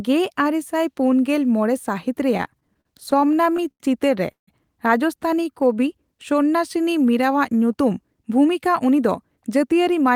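From 2.37 to 3.82 s the speech hits repeated stalls (stutter): fifteen brief hold-ups where packets arrived late, the jitter buffer emptied, and the receiver stretched the last sound to cover each wait. The fills total 263 ms, about 18% of that stretch, the longest 87 ms, with nothing lost. It drags and catches. A spectrogram shows short runs of frozen, smeared harmonics breaking the normal flow, and the waveform shows repeated near-copies of cycles.

At 4.32 s a call audio freeze holds the sound for 158 ms, until 4.49 s. A brief buzzy or hissy continuation of the last sound fades, then about 130 ms of silence follows before speech resumes where it left off, so a gap is inserted and nothing is skipped. The likely cause is packets held up in transit, adding 158 ms of delay. On a spectrogram, a decaying smear gives way to a blank vertical band. The waveform tapers to a flat line.

From 5.38 to 5.81 s a jitter buffer slow-down plays the speech at 90% speed while the pitch holds, adding 52 ms. 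To rebuild its reserve, the receiver repeated single pitch periods over and over, so sounds are drawn out. On a spectrogram, harmonic lines stay level in frequency but features spread wider in time. In the waveform, repeated identical cycles appear in runs.

From 7.67 to 9.73 s a jitter buffer speed-up runs the speech at 109% speed at unchanged pitch, cutting roughly a fifth of a second in total. Too much audio had built up in the buffer, so the receiver trimmed short pieces of one or a few pitch periods again and again, and the delivery sounds hurried. A spectrogram shows compressed syllables with level harmonics. The waveform shows slight discontinuities where cycles were removed.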